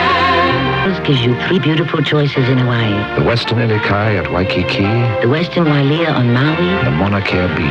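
At 0.85 to 0.87 s the sound lurches abruptly forward with no gap, the two sides butted together so that about a second of audio simply never plays. This is a skip ahead: the receiver discarded a stretch of audio while later material was already queued, cutting roughly a second of delay in one jump rather than stretching or filling the hole.

Shortly after, from 1.09 to 2.63 s, the sound runs noticeably hurried at 111% speed while its pitch stays put, and it rushes again more mildly at 105% from 3.36 to 4.09 s, then runs slightly fast at 104% from 4.81 to 5.91 s. These are jitter buffer speed-ups. With more audio held than its target, the receiver repeatedly trimmed single pitch periods or small groups of them, removing roughly 150 ms in the first stretch and around 50 ms in each of the later two.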